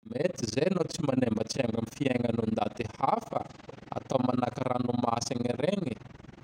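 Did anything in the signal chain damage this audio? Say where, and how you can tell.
Yes, overlap-add ripple from call processing: the speech flutters roughly 20 times a second, dipping about 60 dB, as frames overlap without summing flat.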